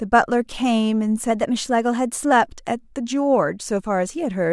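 From 1.31 to 2.32 s the speech runs about 5.8% fast, raising pitch by roughly 98 cents, nearly a semitone, before snapping back to normal. This is a drift correction step, likely clock-matching software jumping the playback rate to rebalance its buffer.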